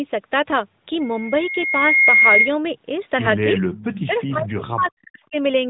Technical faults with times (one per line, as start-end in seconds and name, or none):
3.56-3.84 echo leak
3.76-5.36 speech suppressed in double talk
4.10-4.21 echo leak